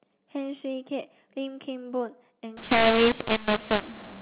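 From 2.57 s to the end of the clip the speech turns harsh and distorted, the sign of a mu-law and A-law mix-up: samples coded with A-law are being decoded as mu-law. The two logarithmic curves disagree, so levels come out scrambled, some too loud and others too soft, and the quietest samples are lifted well above silence, filling pauses with noise. Before 2.57 s the A-law telephone coding sounds band-limited to 4 kHz, as that format is.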